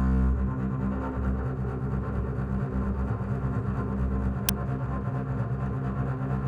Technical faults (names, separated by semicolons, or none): uninitialised buffer